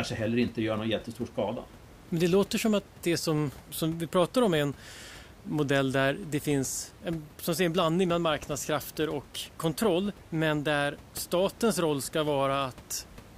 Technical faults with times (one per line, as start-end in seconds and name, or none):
none